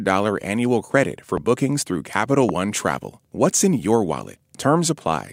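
A speech recording with two loud pops cutting through it. The first lands at 1.37 to 1.40 s, between "annual credit for" and "bookings through", and jumps roughly 10 dB above the speech. The second, at 2.49 to 2.51 s, is stronger at around 15 dB over. Each is a single sharp click while the talking carries on underneath, likely a voltage spike from a plug, switch, static discharge or driver glitch getting into the signal chain.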